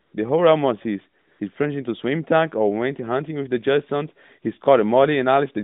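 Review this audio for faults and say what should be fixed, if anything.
AMR comfort noise appears from 0.02 to 0.14 s and from 1.22 to 1.40 s, pauses of 120 ms and 180 ms. Through the phone-band line, narrowed to about 150 Hz to 3.7 kHz, the handset judged the talker silent and stopped sending speech frames. The receiver filled each gap with smooth synthetic noise built from a rough level and spectrum, so the real background switches to an even hiss and back. Unlike a dropout or muting gate, the gap is filled with steady noise rather than going silent. Unlike packet-loss concealment, nothing is repeated or smeared. To prevent it, disable discontinuous transmission or tune voice activity detection so brief pauses keep their speech frames.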